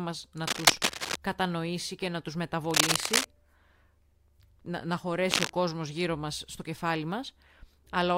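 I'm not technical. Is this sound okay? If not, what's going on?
No. Cable scratch noise at 0.43–1.16 s, 2.71–3.25 s and 5.31–5.50 s: bursts of scratchy rustling, louder than the speech, likely from a loose or worn cable connection.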